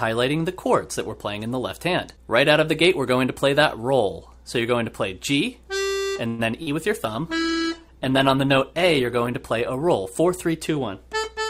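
A call audio freeze runs from 6.27 to 6.41 s. The last sound is stretched into a fading buzz or hiss for about 113 ms, never dropping to full silence. The cause is likely packets held up in transit, leaving the jitter buffer empty so the receiver had to invent audio until they arrived. When the audio resumes it picks up where it stopped, so nothing is lost and everything after is pushed about 113 ms later.

Short concealed packet loss follows at 6.63 to 6.68 s. About 40 ms of audio never reached the decoder in time, and the receiver covered the hole with roughly 37 ms of synthesized continuation built from the preceding sound before blending back into the real signal. The result is a brief smear or wobble, and whatever fell in that 40 ms is gone rather than delayed.

A call bitrate drop spans 7.02 to 10.74 s. The encoder's rate falls from 96 kbps to 15 kbps after the bandwidth estimate collapses. 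With so few bits the codec quantizes coarsely and trims the upper frequencies, so the sound turns muffled, rough and watery. It is at its worst for about 1.15 s at the bottom of the dip, then brightens as the rate climbs back.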